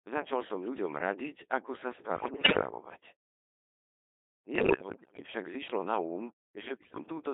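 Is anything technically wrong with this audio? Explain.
Yes. The whole speech clip has passed through the Codec 2 vocoder, which fits a rate of about 2.4 kbit/s. It keeps only pitch, voicing, energy and a spectral envelope, then rebuilds the voice from sine waves. The result is heavily robotic and buzzy, confined to roughly 300 Hz to 3.6 kHz. A spectrogram shows neat synthetic harmonic stacks with no energy outside that band.

Bit errors on digital voice radio hit three stretches: 2.16 to 2.62 s, just after "ľuďom radiť ako sa", then 4.56 to 5.28 s and 6.60 to 7.04 s. The first burst is the heaviest, at a fairly high error rate. Flipped bits corrupt whole frames' pitch, level and voicing, so the voice breaks into warbles and bleeping gibberish. The spectrogram shows harmonics jumping abruptly frame to frame, and the waveform shows erratic level steps.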